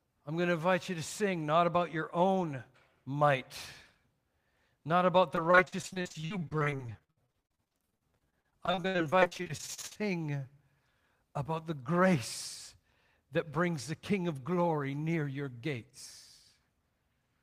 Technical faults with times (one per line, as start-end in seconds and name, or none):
5.35-9.97 repeated packet loss (robotic sound)